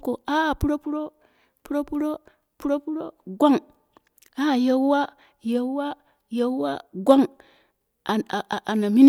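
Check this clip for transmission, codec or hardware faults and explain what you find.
No transmission, codec or hardware faults turn up in this clip.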